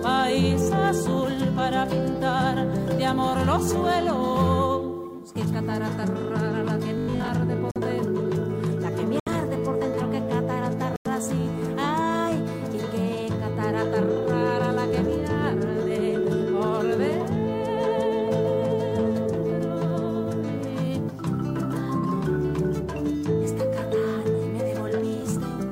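From 6.98 to 7.28 s the sound turns into a rigid metallic buzz at 50 Hz, likely robotic sound from repeated short buffers. A 20 ms block is looped while most of the real audio is skipped. Unlike a simple dropout, this fills the time with a fixed pitched drone rather than a gap.

Corrupt frame muted then cuts clean silence into the sound from 7.71 to 7.78 s, 9.20 to 9.28 s and 10.96 to 11.07 s. The holes start abruptly and last about 66, 82 and 109 ms, which fits two, three and four rejected frames.

At 24.88 s a corrupt frame decoded produces a brief glitch. The damaged data was played anyway, so energy lands at the wrong frequencies for roughly one frame, and the timing is unaffected.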